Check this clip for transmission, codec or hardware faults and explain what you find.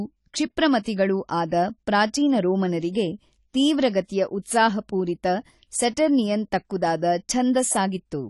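One codec fault runs through the whole clip. Throughout, the speech is dull and swirly with nothing above 11.5 kHz, the likely result of AAC compression, whose low-bitrate quantisation, consistent with about 32 kbps, trims the top band and smears detail into warbling.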